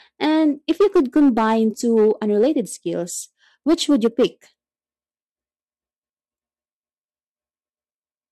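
From 0.24 to 1.56 s the speech shows hard clipping, pushed about 6 dB past the limit of the stage carrying it. The loudest peaks are sliced flat, and crackle rides on them. It returns from 1.96 to 2.47 s at about 2 dB over, heard as lighter crackle on peaks. From 3.69 to 4.26 s it is about 4 dB over. The flattened tops add high harmonics, which cause the grit.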